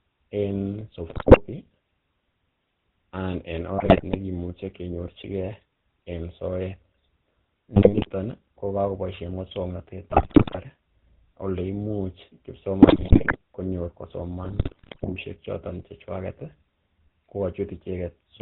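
The whole recording carries the GSM full-rate codec at 13 kbps. It rebuilds the voice from a vocal-tract model driven by sparse, regular pulses, giving a buzzy, gravelly roughness. A spectrogram shows a hard ceiling at 4 kHz with coarse, smeared harmonics.

GSM bit errors then strike in six bursts: 1.08–1.41 s, 3.78–4.17 s just after "anan en", 7.76–8.09 s, 10.10–10.59 s, 12.82–13.37 s and 14.44–15.13 s. Corrupted filter, pitch and gain values produce squawks, pops and gargling, seen as sudden level spikes and distorted spectral bands.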